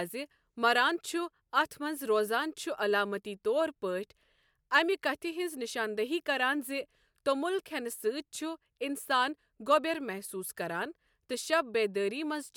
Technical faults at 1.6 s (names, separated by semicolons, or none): none